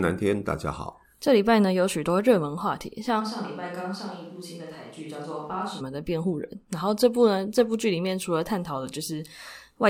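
A switch to a distant microphone from 3.22 to 5.79 s turns the speech suddenly roomy and thinner, about 10 dB quieter with more background noise, likely because the close microphone dropped out.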